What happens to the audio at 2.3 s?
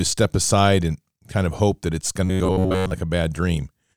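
Right after "hope that it's going", from 2.26 s to 2.91 s, the speech turns robotic. It becomes a rigid, metallic buzz at about 94 Hz that still roughly tracks the words. This is robotic sound from repeated short buffers. The likely cause is audio arriving too seldom, so the playback fills the gaps by looping the last short chunk. A 94 Hz buzz fits a chunk of about 10.7 ms. Most of the span is repeats, not fresh audio.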